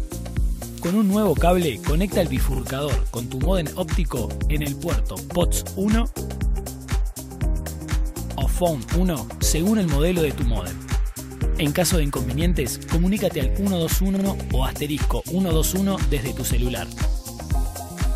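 Around 14.15 to 14.25 s there's a stutter from repeated frames: a roughly 46 ms block of compressed audio plays twice more than it should, which fits a pair of frames being written or sent again, so the clip runs about 93 ms longer.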